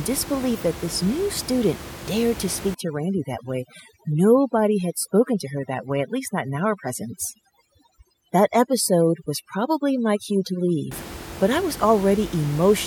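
Overdone noise removal runs from 2.74 s to 10.91 s, starting just after "student dared to speak" and lasting until "but I was". A noise suppressor set far too aggressively is pulling individual frequency bands down or shutting them off whenever their level sits close to its noise estimate. The room noise, about 14 dB below the speech, collapses into near silence scattered with twinkling specks, while the quieter parts of the speech are carved away with it.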